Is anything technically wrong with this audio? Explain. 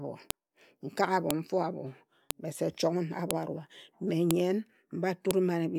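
Yes. The speech was assembled from one-second pieces whose file headers were never stripped, so a file header played as audio. Those header bytes land as a short burst of bogus samples, heard as a sharp, loud click at 0.31, 1.31, 2.31, 3.31, 4.31 and 5.31 s, regardless of the speech underneath.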